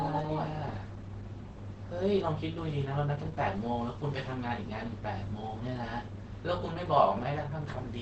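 Opus compression runs throughout the speech clip, from start to finish. Nothing is heard above about 8.5 kHz, and the sound is muffled and hoarse. The likely cause is a low-rate Opus encode in its speech (SILK) mode at wideband. Starved of bits, the encoder models the voice coarsely and drops the top of the spectrum. The damage is heavy and points to roughly 12 kbps.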